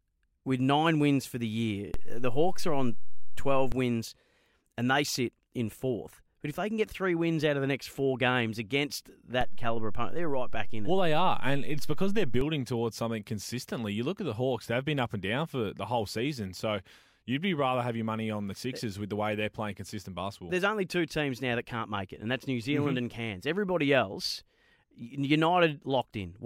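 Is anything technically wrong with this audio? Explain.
Yes. There are two DC steps. The waveform's zero line jumps, as happens when a converter recalibrates or an offset input is switched in, and each jump is heard as a low thump or click. The first comes just after "wins for the year", from 1.94 to 3.72 s, at about -21 dBFS. The second follows "next four games against", from 9.41 to 12.41 s, at about -23 dBFS, ending before "towards something consistently". The speech itself carries on unchanged through both.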